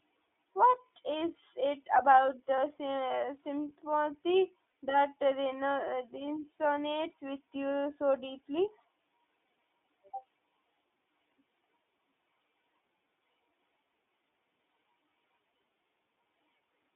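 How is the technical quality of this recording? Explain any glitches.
The recording is speech carried over a narrowband iLBC codec throughout, with three brief glitches from lost iLBC frames.

The iLBC codec confines the sound to roughly 250 Hz to 3.6 kHz, its damage plainly audible as a rough, slightly synthetic edge from coding each 20 ms frame on its own, fitting the 15.2 kbps mode. A spectrogram shows an empty region above 3.6 kHz.

Lost iLBC frames occur at 2.56 to 2.58 s, just after "is it about", at 4.70 to 4.74 s and at 6.26 s. The decoder repeats the last pitch cycle mixed with noise, so each gap is a short, buzzy held vowel. The second gap's 40 ms length suggests two frames. On a spectrogram each appears as a flat, smeared harmonic stripe, and the sound recovers at once.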